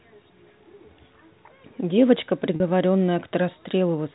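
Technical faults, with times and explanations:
2.56–2.60 s, packet loss with pitch repetition: about 40 ms of the stream went missing, which fits two 20 ms packets, and the receiver bridged the gap by repeating the last pitch period of the speech. The hole is short, so the repeated cycle has little time to fade. The speech seems to catch on one slightly buzzy, held tone for an instant before the real signal resumes through the narrowband G.711 telephone path.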